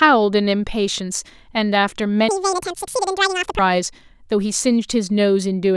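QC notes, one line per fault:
2.29–3.59 s, audio read two samples at a time (double speed): the speech abruptly races at twice its pace and leaps a full octave, 12 semitones, giving a thin, chipmunk-like quality. The reader is treating each pair of samples as one frame, as though the stream held two channels or samples twice as wide, so the data is consumed twice as fast.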